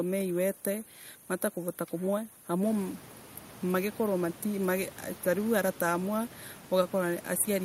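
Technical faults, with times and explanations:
Nothing here points to a technical problem; the background noise in the room picks up by about 15 dB at about two and a half seconds in, but it stays about 20 dB under the speech and is simply part of the recording.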